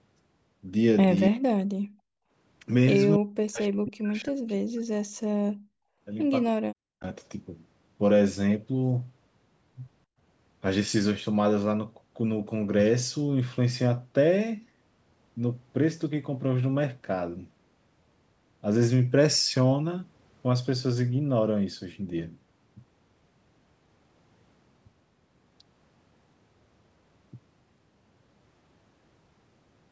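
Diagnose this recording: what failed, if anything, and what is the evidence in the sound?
Speech suppressed in double talk at 1.28 to 1.44 s, 3.18 to 5.13 s and 6.51 to 7.05 s is a call-processing fault. The voice sinks by something like 40 dB, in a brief dip, then a stretch of about two seconds, then about half a second. The likely cause is the echo canceller meeting both sides talking at once and, unable to split the local voice from loudspeaker echo, turning everything down.

Background gated by the echo canceller at 1.83 to 2.31 s, 5.53 to 6.01 s and 10.06 to 10.18 s also belongs to the call-processing stage. Here the room tone itself collapses, by about 39, 37 and 38 dB, for roughly half a second, half a second and a tenth of a second. The canceller clamps the microphone hard while far-end audio plays, then releases it. The band limit at 8 kHz from the call's microphone processing sits underneath both effects.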